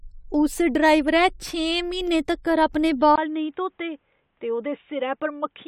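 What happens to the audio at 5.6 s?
At 5.6 s the audio is inside a dull, boxy stretch running from 3.16 s to the end, right after "छें म्हीनें तक्कर अपने", likely an input switched to a poorer device. A brief gap marks the switch. The spectrogram shows nothing above 3.8 kHz, and the waveform sits about 5 dB lower.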